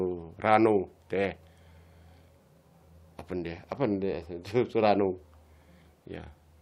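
Nothing in this recording stands out as a technical fault, so there's no moment in it that calls for a closer look.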